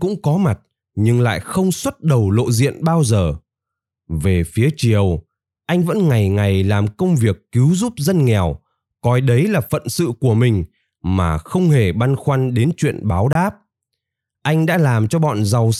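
A speech clip with one block of digital silence from 13.33 to 13.35 s: about 23 ms of the signal drops to silence and returns with no fade. This is heard as a brief hole. The gap length fits a 1024-sample buffer that was not filled in time. On the waveform it appears as a nearly flat line. A spectrogram shows a blank vertical strip with thin broadband streaks at both edges.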